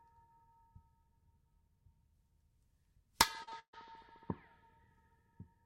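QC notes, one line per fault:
3.43 to 3.53 s, short concealed packet loss (two back-to-back events, at 3.43 to 3.49 s and 3.49 to 3.53 s): a brief smear or wobble where the audio loses its definition for a moment. Packets carrying about 40 ms and then about 20 ms of audio never reached the decoder in time. The receiver bridged each hole, 36 ms and then 22 ms, by extending the preceding sound, pitched if voiced or as shaped noise if not, before blending back into real audio.
3.59 to 3.75 s, burst of packet loss: the sound is held over as a buzz or hiss that dies away into about 90 ms of silence, then the audio resumes further along with a chunk gone. A run of packets was lost or arrived too late, so the receiver filled a 136 ms gap by continuing the last sound and turning it down until nothing remained. About 140 ms of the original audio is missing.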